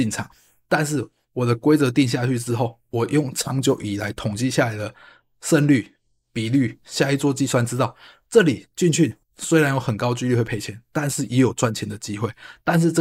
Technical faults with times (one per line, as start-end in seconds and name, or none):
none